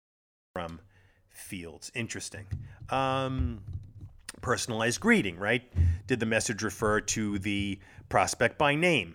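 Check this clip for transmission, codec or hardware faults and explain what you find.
There is one fault, a cut-off start. The first 0.56 s is digital silence. At 0.56 s the speech begins abruptly, already in progress. The capture or stream started late, so the opening of the sound never reached the recording. There is no natural onset or fade-in. Instead, the audio jumps straight from nothing into mid-sound, and the listener hears the speech enter partway through.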